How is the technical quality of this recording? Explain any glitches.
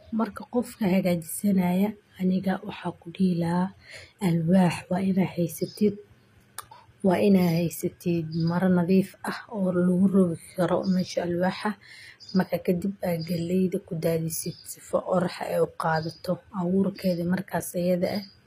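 The quality is compromised by codec damage. Throughout, the speech has plainly audible HE-AAC compression artefacts. The likely cause is a low bitrate near 24 kbps. Rebuilt treble makes s sounds gritty and metallic. Nothing remains above 15.5 kHz.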